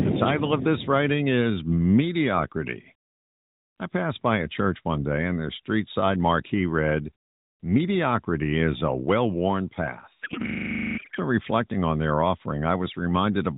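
From 10.22 to 11.18 s a codec payload misread replaces the speech with garbled, warbling noise that barely tracks it. This points to octet-aligned AMR frames being unpacked as bandwidth-efficient. Unlike packet loss, nothing drops out or repeats; frames keep arriving, scrambled.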